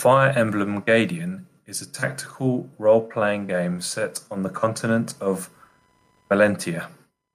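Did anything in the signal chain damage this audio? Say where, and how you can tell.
Yes. Computer activity noise appears from 3.34 s to the end of the clip: a chirping buzz repeating around 1 kHz, roughly 40 dB below the speech, independent of it. This is an analogue wiring fault: processor or graphics load shifts the shared ground, modulating the audio circuit.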